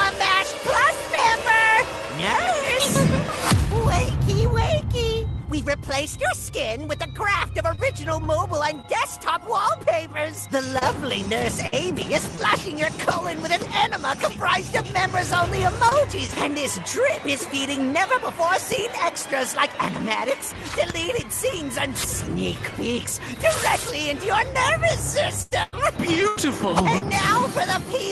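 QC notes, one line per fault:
7.71–13.25 s, scattered short gaps: brief ticks and small smears, about five of them, the longest around 50 ms. Lost or late packets were each patched by continuing the preceding sound.
15.89–15.93 s and 16.27–16.30 s, short concealed packet loss: two quick smeared blips, each replacing about 20 ms that arrived too late and was filled by extending the previous sound.
15.91–15.93 s and 16.28–16.30 s, lost packet rebuilt from error correction: a moment of rougher, noisier texture, played from the low-bitrate Opus in-band copy instead of a gap.
25.42–27.03 s, repeated packet loss (robotic sound): choppy stutter with pieces missing. Four holes totalling about 300 ms, the longest 95 ms, were patched one after another, covering about 18% of the stretch.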